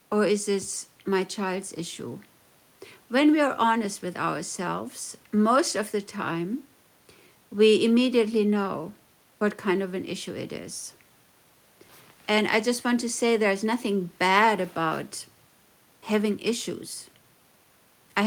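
No audible technical faults.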